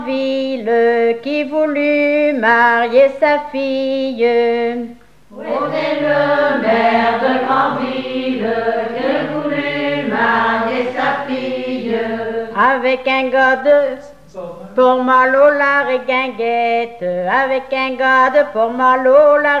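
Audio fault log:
No technical faults are heard anywhere in this clip. There is nothing to log.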